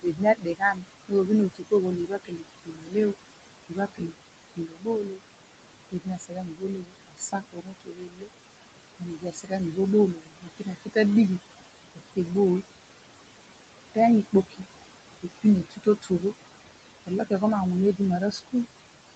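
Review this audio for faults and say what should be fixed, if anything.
Throughout the clip the background pumps away between phrases and returns under the speech. These are noise suppressor artifacts: it cuts noise bands by about 21 dB frame by frame.

From 0.02 to 12.64 s, and again from 13.82 s to the end, soft consonants and word endings sound swallowed. This is speech cut by the noise suppressor, with drops of about 22 dB and about 21 dB, roughly 7 seconds of sound affected in the first stretch. The suppressor treats quiet speech as noise, even though the room noise sits only about 10 dB below the speech.

To prevent both, lower the suppressor's strength or raise its speech-detection sensitivity, and reduce the room noise at the microphone so less suppression is needed.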